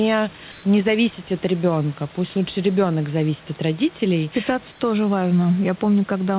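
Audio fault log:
0.52–0.64 s and 4.72–4.80 s, comfort noise in place of the background: In two short pauses, the room noise turns into a smooth, featureless hiss. The first lasts 120 ms, just before "не зависеть от ребенка". The second lasts 80 ms, right after "ребенок зависит от родителей". The hiss drops about 1 dB and about 2 dB. This is likely discontinuous transmission, with the receiver filling the gaps with synthetic noise. Like the rest of the call audio, it stops at 4 kHz.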